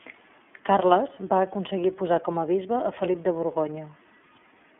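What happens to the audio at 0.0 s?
From 0.0 s and for the whole clip, the speech has passed through the iLBC codec, a narrowband VoIP coder that handles each 30 ms frame on its own without reusing the previous one, in a mode that fits 13.33 kbps. The result is a telephone-band sound confined to roughly 250 Hz to 3.4 kHz with nothing above 3.6 kHz, so sibilants lose their sharpness, and the voice has a plainly audible rough, synthetic grain.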